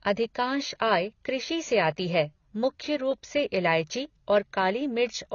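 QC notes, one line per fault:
throughout: AAC compression, likely AAC-LC encoding at a low rate that fits about 24 kbps. Too few bits for the quantiser means it drops the top band, leaving nothing above 6.9 kHz, so the speech sounds dull and smeared, with plainly audible coding damage.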